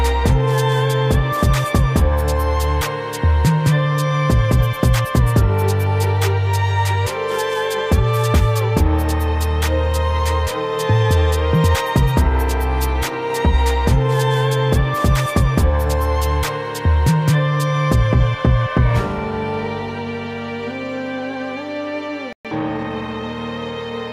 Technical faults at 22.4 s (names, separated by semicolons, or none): playback stall; time-compressed catch-up